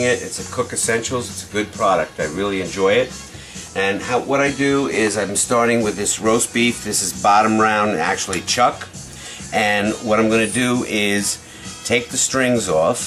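At 9.08 s a 40 ms chunk of audio was delivered late, one chunk behind where it belonged, so the chunks out of order play in swapped sequence until 9.16 s. No audio goes missing; the two adjacent 40 ms pieces simply trade places. Each of the three joins this creates is a hard discontinuity in the waveform, so that brief stretch sounds jumbled.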